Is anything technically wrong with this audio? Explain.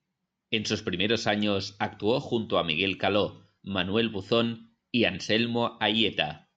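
No, nothing here stands out as a technical problem; the speech comes through steady and intact the whole way, with nothing that calls for attention.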